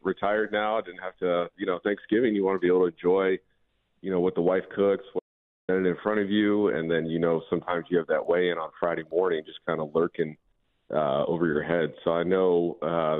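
At 5.19 s the sound cuts to total silence for about 0.49 s, an audio dropout to silence, likely a lost input. Unlike a fade or gate, no room tone remains.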